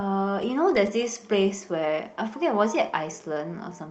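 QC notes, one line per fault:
Nothing to flag here; I listened all the way and didn't hear a single fault.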